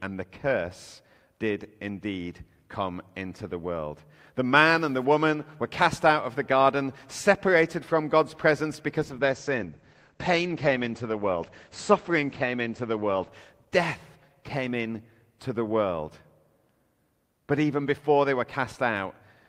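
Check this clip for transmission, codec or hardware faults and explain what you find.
One fault is present: a call bitrate drop between 9.02 and 16.81 s. The encoder was starved of bits, consistent with a fall from about 64 to 12 kbps. On a spectrogram the speech content cuts off sharply at 8 kHz instead of reaching 20 kHz. The speech sounds muffled and watery, worst for about 3.5 s.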